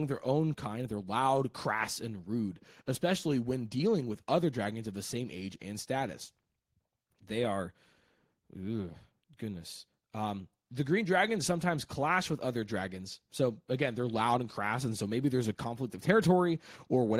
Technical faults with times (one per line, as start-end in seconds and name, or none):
none